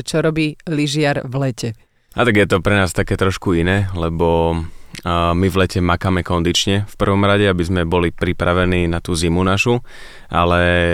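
Nothing in this speech recording stands out as a technical fault at any point, so there's nothing to flag here.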